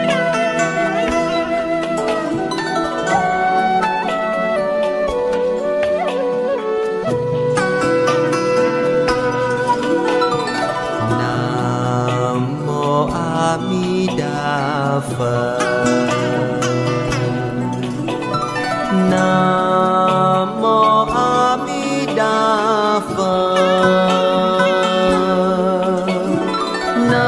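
From 17.25 to 20.2 s, a resampler restarted on every block converts 48 kHz to 24 kHz in 50 ms chunks, leaving edge errors heard as a 20 Hz ticking buzz.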